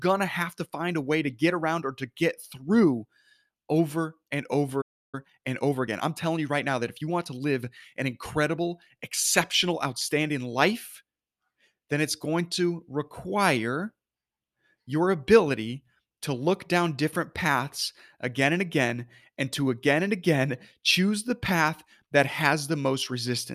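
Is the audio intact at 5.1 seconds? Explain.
No. At 4.81 s, just after "over and", the player most likely ran short of data or had its output thread blocked, a playback stall. The speech cuts off in mid-flow and stays silent for about 0.32 s, until 5.15 s.

Once output resumes, the player works off its backlog through time-compressed catch-up, cutting out small slices and cross-fading across the gaps. From 5.15 to 8.15 s the speech runs about 1.1 times fast at its normal pitch, sounding hurried.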